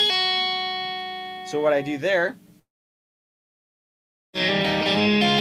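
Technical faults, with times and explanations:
2.59 to 4.36 s: long network dropout, likely. About 1.7 s of audio never arrives; a brief fading continuation gives way to silence, then playback resumes without the lost section.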